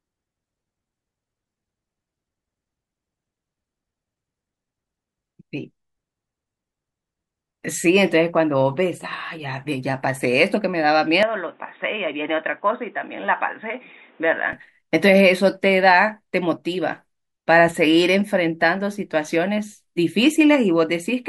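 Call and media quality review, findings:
Speech turns dull and boxy 11.23 to 14.53 s, nothing above 3.8 kHz, level about 5 dB down, new noise about 30 dB under speech, no gap at switch. Likely input switched to a poorer device. New noise floor and level shift rule out a codec bandwidth drop.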